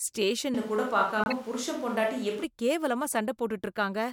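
At 0.55 s the sound turns roomy and hollow, with thinner bass. This is a switch to a distant microphone, likely because the close microphone dropped out. Level stays about the same. Room noise rises, but stays well below the speech. The close sound returns at 2.44 s.

From 1.24 to 1.33 s a corrupt frame decoded gives a fairly loud squeaky burst. Damaged compressed data put energy at wrong frequencies. A second, much quieter blip comes at 3.13 s.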